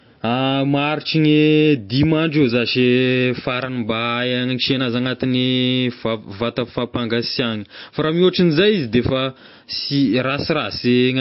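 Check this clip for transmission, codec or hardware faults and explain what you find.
One codec fault runs through the whole recording. MP3 compression, throughout: nothing is left above 5.6 kHz, which points to the encoder cutting treble at a fixed frequency to save bits at a very low bitrate, around 32 kbps. Weak frequency lines drop in and out between frames, so the speech sounds watery and swirly, with plainly audible damage to s sounds and smeared consonant attacks. MP3 encoding is the likely cause.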